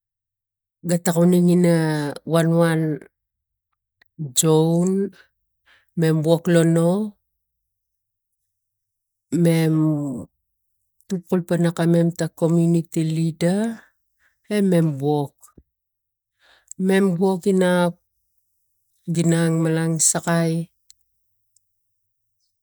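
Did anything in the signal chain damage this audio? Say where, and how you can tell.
Yes. CD scratch ticks at 6.39 to 6.82 s in this speech clip: three brief clicks, each at most about a millisecond, spaced roughly evenly. At the storage and playback stage, a disc blemish exceeded error correction once per rotation, and the player patched or muted the lost samples.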